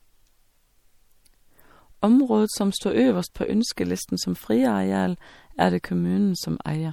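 Throughout the speech there is plainly audible damage, likely from MP3 compression at a bitrate the sound suggests is around 64 kbps. Weak frequency content flickers in and out between frames, giving a watery, swirling texture and smeared consonant attacks. A spectrogram shows isolated shimmering patches and a hard ceiling at 19.8 kHz.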